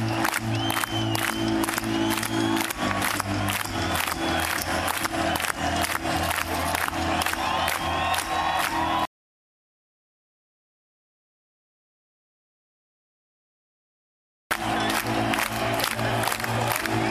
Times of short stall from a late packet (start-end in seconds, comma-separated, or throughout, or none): none